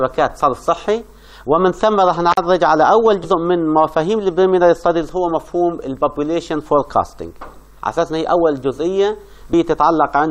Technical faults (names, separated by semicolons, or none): intermittent contact; damaged data in a compressed stream